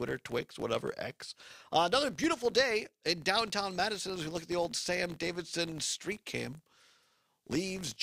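All the way through there's a steady buzz near 46.9 Hz from a filter restarted on every block. Each block starts cold, which fits 1024-sample blocks, so each one ticks on, tracking level.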